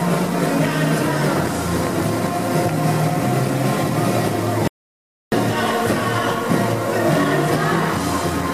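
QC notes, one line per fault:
4.68–5.32 s, audio dropout to silence. The sound stops abruptly mid-flow and resumes just as suddenly about 0.64 s later. The gap is silent, with no room tone or noise floor beneath it. The likely cause is a momentary loss of the input signal, such as a disconnected device, a failed link or a stray mute, while recording carried on writing silence. Whatever sounded during that stretch is lost.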